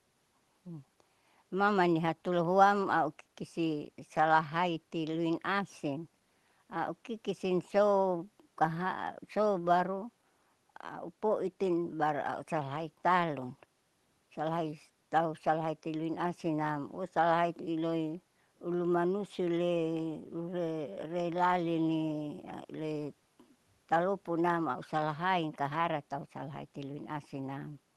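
Nothing stood out on listening to this speech, which carries the ordinary character of audio sent over a WebRTC call using the Opus codec.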